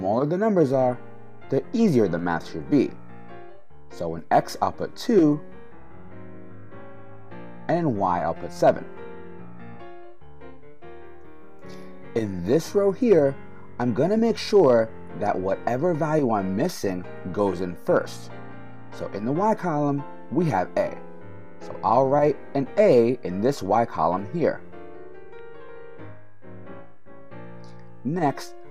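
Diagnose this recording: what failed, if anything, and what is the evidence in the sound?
A DC step occurs at the converter or analogue input stage. At 0.74 s there is a single low thump. The waveform's zero line jumps by about -38 dBFS and stays offset until the end. That fits a recalibration or a switched-in input carrying a DC offset.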